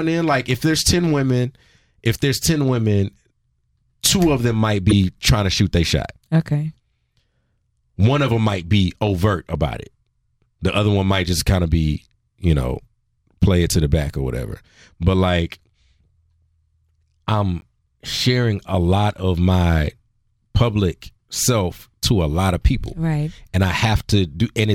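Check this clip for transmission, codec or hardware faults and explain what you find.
Corrupt frames were decoded at three points in this speech. At 4.90–4.93 s, between "two of them might" and "trying to shoot their", one damaged frame plays as a loud glitch. At 8.61 s, between "of them" and "be overt about it", a faint glitch sounds. At 17.61–17.64 s, just before "sharing a lot of", several frames produce a quiet glitch. In each case the decoder misread flipped bits and placed energy at the wrong frequencies. Unlike a dropout or click, the sound lasts about as long as the damaged frames.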